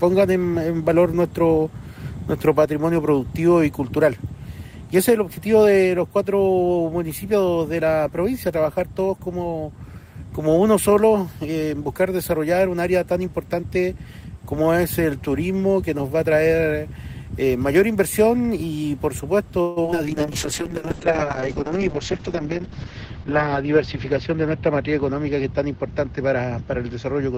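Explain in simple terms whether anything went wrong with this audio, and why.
Three things went wrong, all close together near the 20-second mark.

Repeated packet loss (robotic sound): From 19.61 to 19.98 s, pieces of the audio kept failing to arrive in time. Five times in that short stretch, the player filled the hole by stretching out the last bit of sound it had, with the longest gap lasting 150 ms. About half of that stretch is made-up filler, so the sound turns choppy, with small bits missing.

Skip ahead: Inside that same rough patch, at about 19.91 s, the playback jumped forward instead of waiting. Audio had piled up behind the delay, and the player threw some away to catch up. Roughly 70 ms of sound is simply gone, and the two sides of the jump are stitched together almost directly, so there is a tiny abrupt lurch rather than a pause.

Call bitrate drop: Right after, from 20.05 s to the end of the clip, the connection was judged to be weaker, so the sound was squeezed into far less data. 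The encoder describes the audio more crudely and also drops the upper range, which falls from about 20 kHz to 8 kHz. The sound becomes duller, muffled and rough, with the low-quality setting holding for about 3 seconds.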